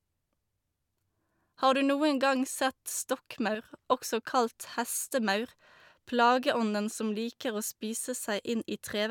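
At 3.55 s the speech level drops abruptly by about 6 dB and stays down for roughly 0.1 s, recovering at 3.65 s, just before "også kalt hestemaur plageånden". The cause is likely one channel dropping out: with one side of the stereo signal briefly silent, the mono sum keeps only half of the shared content. The result is a short, sharp dip in loudness, heard as a momentary drop in level rather than a gap.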